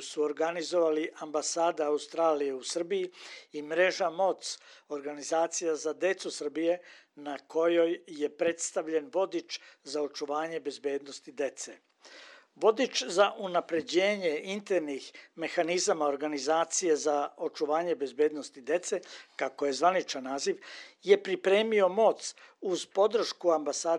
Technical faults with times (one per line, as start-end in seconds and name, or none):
none